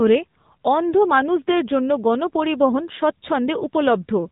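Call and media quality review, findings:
AMR narrowband mobile codec, throughout the speech. Nothing above 3.8 kHz, buzzy, synthetic voicing from a vocal-tract model driven by sparse pulses per subframe. Codec damage plainly audible, consistent with a low AMR-NB mode near 7.4 kbps. Unlike a simple telephone-band filter, the voice itself is resynthesised, so the roughness is codec artefact, not just missing treble.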